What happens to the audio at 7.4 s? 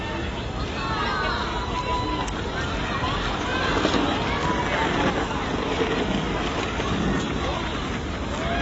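At 7.4 s you're hearing the same thing that runs through the whole clip: the sound is dull and smeared, with nothing at all above 8 kHz and a warbly, fizzy edge on anything sustained. That's likely AAC compression at a low bitrate, something like 24 kbps AAC-LC. The encoder pulls its cut-off down and quantises the remaining frequency lines so coarsely that bands get holes or fill-in noise, and that's where the texture comes from.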